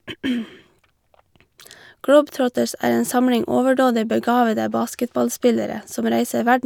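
Dropped samples at 2.44 s: a single sharp click in the speech, likely from about one sample missing, making the waveform jump abruptly between values.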